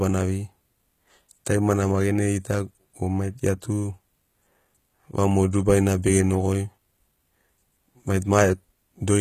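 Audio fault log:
throughout, HE-AAC compression: The speech has a bright but synthetic top end, with s sounds coming out gritty, metallic and lispy, and nothing at all above 14.9 kHz. This is likely HE-AAC coding at a low bitrate, which fits roughly 20 kbps. Only the lower spectrum is actually coded. The treble is rebuilt by copying lower bands upward under a coarse envelope, so its harmonics fail to line up with the real ones and the codec damage is plainly audible.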